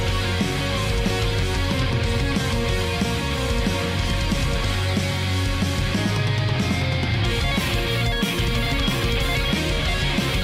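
No technical faults can be heard anywhere in the clip.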